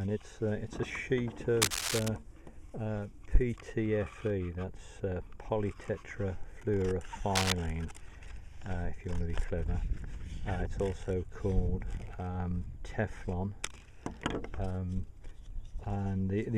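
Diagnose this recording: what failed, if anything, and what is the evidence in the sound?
Analogue wiring stage: cable scratch noise, uneven rustling bursts at 1.62–2.09 s and 7.35–7.52 s, likely a worn contact whose resistance fluctuated while moved.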